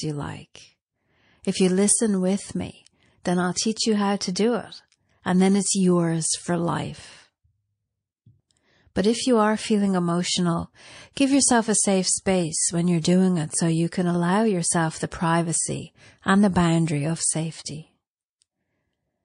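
MP3 compression runs through the whole speech recording, with plainly audible codec damage that fits a low bitrate of around 40 kbps. With so few bits, the encoder trims the treble at a fixed cut-off and drops weaker frequency lines, which flicker in and out from frame to frame. This likely accounts for the watery, swirling texture, the metallic edge on sibilants and the softened consonant onsets.

Pre-echo appears at 3.54 to 3.56 s, between "with me then I'll" and "you how to do". A short hiss, about 13 dB above its surroundings, leads the attack by 21 ms. It recurs at 11.13 to 11.17 s, after "you are feeling emotional" and before "give yourself a safe", spreading 35 ms and rising about 22 dB. It recurs again at 13.01 to 13.04 s, between "safe space when you're" and "it so you can", spreading 30 ms and rising about 17 dB. Each time, quantisation noise sized for a loud onset is spread across the whole transform block, so it fills the quiet instant before that onset. 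The smearing points to long blocks of roughly 52 ms with no switch to shorter blocks at the attacks.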